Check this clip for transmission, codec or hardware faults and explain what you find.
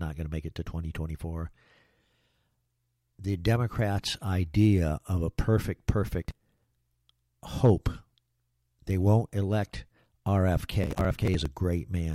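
Two bursts of processor overload crackle: 6.22 to 6.68 s, just after "idea of a perfect", and 10.83 to 11.46 s. Overloaded processing repeatedly misses buffers of around 10 ms, skipping dozens and leaving gritty tearing. The waveform shows hard-edged dropouts, and the spectrogram shows vertical broadband streaks.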